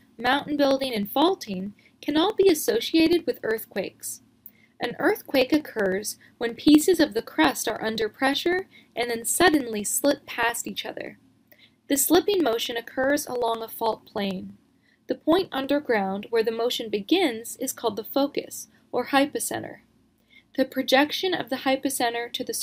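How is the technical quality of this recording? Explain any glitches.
The recording has one fault: periodic USB or driver dropouts, running from 0.08 s to 15.7 s. Every 63.5 ms, about sixteen times a second, a tiny slice of audio goes missing. Some background task stalls the USB bus or the audio driver at a fixed interval. Each stall loses about half a millisecond, which is skipped rather than filled. Hundreds of these gaps produce a steady train of small ticks, heard only while sound is present.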